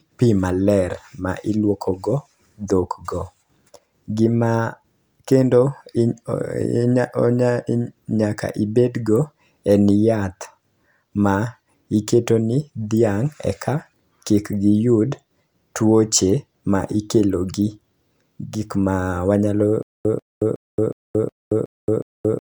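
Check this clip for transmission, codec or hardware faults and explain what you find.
One transmission fault appears near the end of the speech: a stutter with silent gaps from 19.83 s to the end of the clip. A fragment of about 143 ms plays, followed by about 223 ms of digital silence, and the cycle repeats seven times at an even 366 ms pace. This likely comes from a stalled stream replaying its last buffered piece at each retry and then running dry, so the speech that should have followed is lost. Unlike random dropouts, the same burst returns identically at a steady rhythm. Unlike a seamless loop, dead silence separates each repeat.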